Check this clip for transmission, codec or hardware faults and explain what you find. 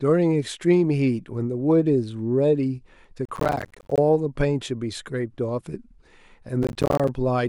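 There's processor overload crackle twice, from 3.25 to 3.98 s and again from 6.63 to 7.08 s. Missed deadlines for roughly 10 ms buffers leave dozens of tiny silent gaps, heard as gritty tearing over the speech.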